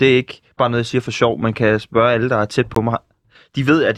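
A speech clip where the program likely failed to fill its output buffer in time, leaving a block of digital silence about 17 ms long at 2.75 s, just after "alle der er tæt".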